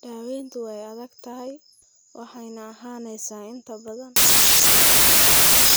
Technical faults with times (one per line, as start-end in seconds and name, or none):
4.16-5.76 samples built from the wrong bytes